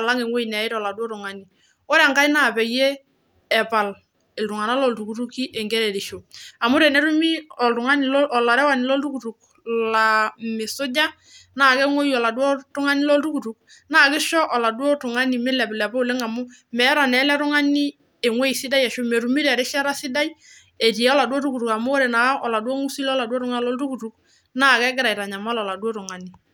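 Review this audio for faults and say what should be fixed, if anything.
No technical faults turn up anywhere in the recording, so nothing in the signal needs fixing.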